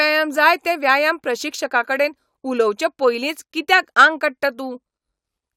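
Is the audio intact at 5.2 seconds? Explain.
Yes, the speech at 5.2 seconds plays through intact, with no dropout, click, distortion or other fault at that moment.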